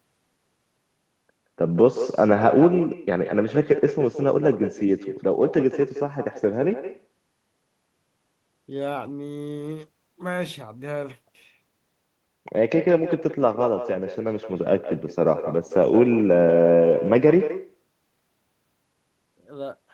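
Throughout, echo with no canceller: the far end's loudspeaker feeds its microphone, returning every phrase roughly 150 ms later, about 11 dB down, as a distinct thin copy rather than smeared room reverb.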